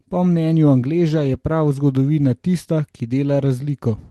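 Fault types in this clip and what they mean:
No faults can be heard in this speech recording.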